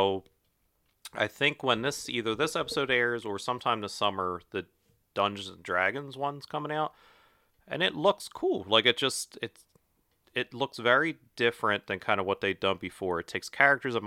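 No audible technical faults.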